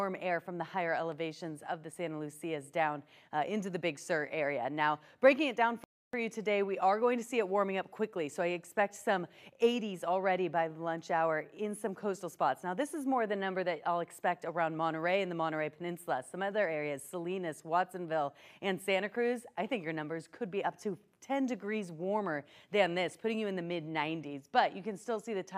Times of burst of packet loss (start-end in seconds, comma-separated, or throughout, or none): none